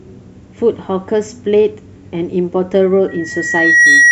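From 3.08 s to the end of the speech, the microphone is hearing its own loudspeaker and the loop gain at 1.9 kHz climbs past one, producing loudspeaker feedback squeal. A single tone swells over roughly the next 0.7 s, finishing around 10 dB above the speech.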